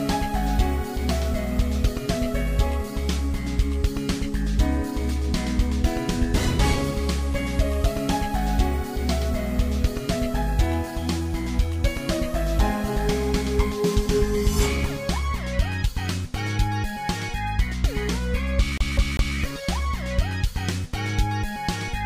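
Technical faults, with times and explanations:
18.78 to 19.37 s, CD stuck on one turn: the laser jumps back one track each revolution, so a 198 ms slice repeats three times with brief mutes between.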